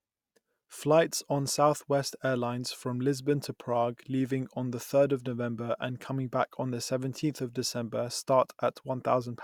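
No technical faults can be heard anywhere in the recording. Nothing in the signal stands out at any point that would call for a timestamp.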